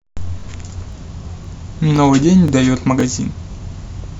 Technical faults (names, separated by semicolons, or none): overlapping chunks